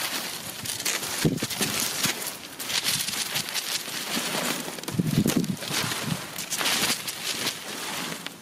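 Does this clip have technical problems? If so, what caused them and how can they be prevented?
Yes. Gain pumping throughout: loud and soft parts are squashed closer together in level, a swing of around 20 dB, likely from input gain set far too high with a fast limiter clamping down. Prevent it by lowering the input gain so peaks sit well below full scale and the limiter rarely acts.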